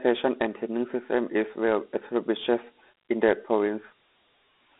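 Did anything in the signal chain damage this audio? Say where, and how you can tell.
Yes. Dialogic VOX ADPCM damaged the audio at the codec stage. Throughout, the speech stops near 3.7 kHz and carries gritty 4-bit hiss, which fits 32 kbps coding.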